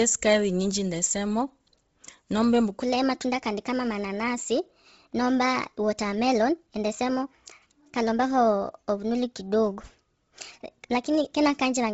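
From the start, the speech carries heavy Bluetooth LC3 compression damage. Nothing sounds above 7.7 kHz. Upper detail is thinned and replaced with a grainy, breathy hiss. The harsh coding points to a low rate near 24 kbps, likely an LE Audio link using short 7.5 ms frames.

At 2.83 s a section at the wrong speed begins and runs to the end. Playback is 1.24 times too fast. Pitch rises about four semitones with it, so the voice turns high and hurried. The likely cause is audio fitted to the wrong clock.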